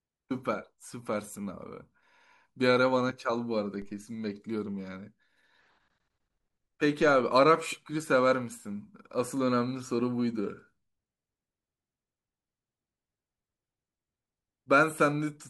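At 3.82 s there's a DC step: the waveform's zero line suddenly jumps by about -39 dBFS, then drifts back as a 2 Hz high-pass bleeds it off. You hear one low thump while the speech carries on untouched.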